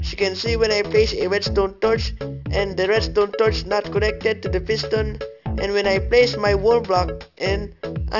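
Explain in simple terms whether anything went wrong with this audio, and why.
Something did go wrong here: the whole clip, start to finish, has aliasing. Anything above about 6 kHz wasn't filtered out when the sound was squeezed down to a lower sample rate, which fits a drop from 44.1 kHz to 12 kHz. Those high sounds didn't just vanish; they bounced back down as wrong, unrelated pitches. That's why the hissy, bright parts come across gritty and metallic, and nothing natural sits above that 6 kHz edge.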